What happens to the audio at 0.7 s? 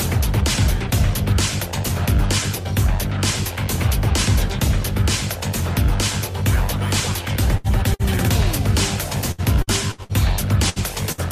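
Nothing goes wrong at 0.7 s; the audio plays through that moment intact, with no dropout, click or other fault.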